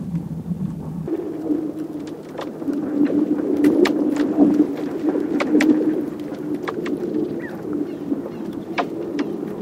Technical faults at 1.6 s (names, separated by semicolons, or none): audio read two samples at a time (double speed)